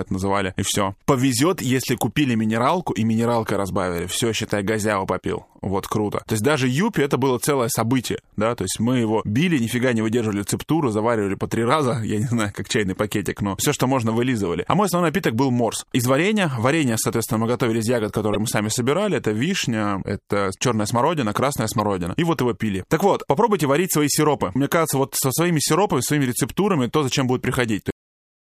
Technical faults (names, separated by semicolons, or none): damaged data in a compressed stream; cut-off end